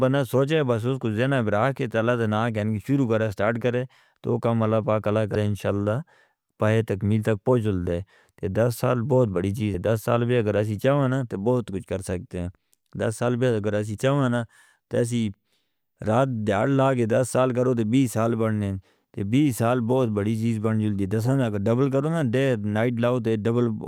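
At 5.32 s and again at 9.71 s, damaged data in the compressed stream produces brief disruptions heard as a chirp, squawk, click or short hole, each about 40 ms. The decoder misreads corrupt frames, then resynchronises.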